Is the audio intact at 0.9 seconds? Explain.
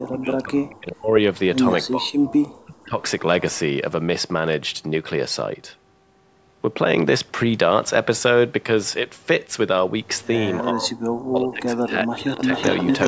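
No. At 0.9 seconds the speech sits inside a stretch from 0.0 to 1.12 s where it is pushed down hard, by as much as roughly 40 dB, over about a second in total, so the talker dips. This is likely speech suppressed in double talk: with both ends talking at once, the echo canceller cannot tell the near talker from loudspeaker echo and attenuates both together.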